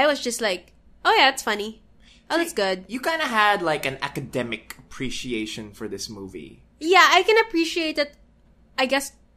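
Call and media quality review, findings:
Nothing to flag here; the speech comes through without any dropouts, glitches or other problems worth raising on the ticket.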